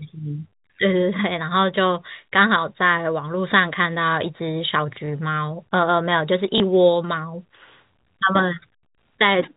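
At 5.06 s and 6.58 s, a single 20 ms packet is lost. This is packet loss with last packet repeated. The receiver fills each gap by replaying the previous chunk. The repeat seldom lines up with the pitch cycle, so each spot gives a small blip.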